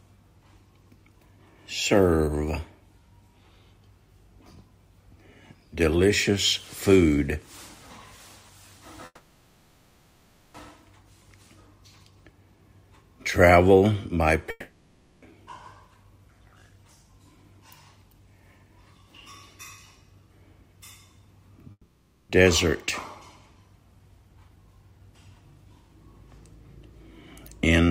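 From 9.05 to 10.56 s there is a call audio freeze. The last sound stretches into a fading buzz, then near silence, for about 1.5 s. It is likely caused by delayed packets emptying the jitter buffer. When the sound resumes it carries on exactly where it stopped, so nothing is lost. That is what separates it from a dropout. The same thing happens more briefly from 21.71 to 22.31 s, adding a 0.58 s gap.

From 14.50 to 15.24 s a long network dropout gives the same fading fill followed by near silence. Here about 0.72 s of audio, which likely never arrived, is skipped, and the sound comes back further along.

At 15.87 to 16.57 s a jitter buffer speed-up runs the sound at 109% with the pitch unchanged, trimming about 70 ms to reduce the delay. A second speed-up from 23.99 to 26.06 s runs at 106% and removes roughly 150 ms. Both stretches sound hurried, not pitched up as a faster playback rate would.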